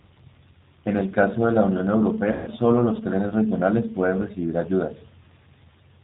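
It's a speech clip, and the whole thing has that G.729 codec character throughout. The top end stops dead around 4 kHz, and the voice comes out gritty and a bit synthetic, because the decoder rebuilds each short frame from a vocal tract filter, a pitch predictor and a handful of pulses rather than the actual waveform. The roughness is plainly audible, and it points to the 8 kbit/s G.729A flavour of the codec. Then there's VoIP packet loss concealed by the speech codec from about 2.32 to 2.50 s. Roughly 150 ms of audio never arrived, so the decoder kept going on its last pitch and filter settings and stretched the gap into a buzzy tone or coloured noise that sags in level. Because every frame leans on the one before, the voice sounds weak or distorted for a moment after the packets start arriving again, which is why the damage runs a bit past the gap itself.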